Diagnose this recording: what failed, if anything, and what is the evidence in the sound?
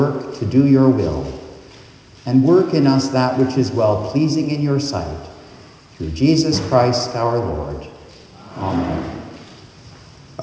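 No faults found.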